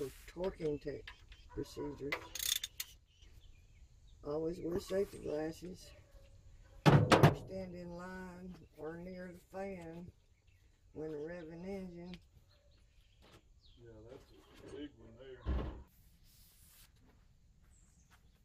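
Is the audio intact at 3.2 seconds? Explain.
No. From 2.97 to 3.22 s the whole signal drops abruptly by about 8 dB, with the background noise falling by the same amount at the same instant, so the sound and its noise floor step down together rather than fading. This is a sudden gain jump. The likely cause is a digital gain change applied in a single sample step, with no ramp to smooth the transition, such as a level setting or bit shift taking effect at once.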